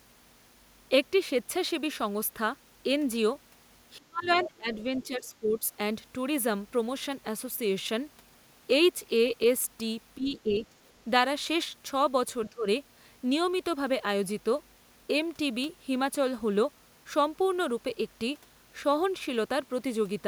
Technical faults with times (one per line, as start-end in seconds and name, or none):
3.98-5.58 speech suppressed in double talk
4.22-4.47 other side's voice leaking through
4.74-4.83 other side's voice leaking through
10.16-10.62 speech suppressed in double talk
10.36-10.92 other side's voice leaking through
12.49-12.66 speech suppressed in double talk